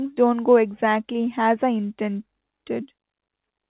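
No technical faults can be heard in this speech clip. It comes over a WebRTC call path with nothing above 4 kHz, a narrowband sound that points to G.711 mu-law telephone coding.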